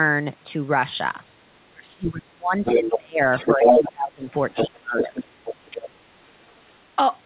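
Speech clip, band-limited to 4 kHz as a narrowband telephone codec path would be, with speech suppressed in double talk from 1.69 to 4.36 s and 4.67 to 5.21 s. The talker dips by as much as about 30 dB, likely because the echo canceller attenuated everything while both ends spoke. The other side's voice leaks through at 2.65–2.98, 3.32–3.92, 4.30–4.67, 4.98–5.90 and 6.48–6.52 s, at times as loud as or louder than the talker and later much fainter, likely residual loudspeaker echo the canceller failed to remove.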